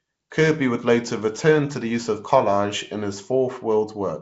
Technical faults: Nellymoser compression

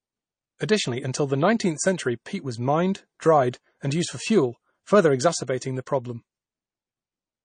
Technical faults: MP3 compression; pre-echo

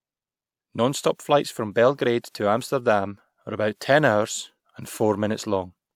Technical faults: none

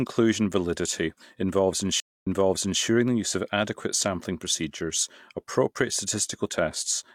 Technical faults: stream reconnect

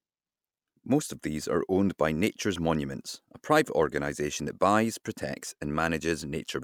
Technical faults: none

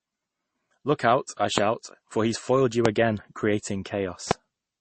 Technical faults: transcoding between lossy codecs; loud pop

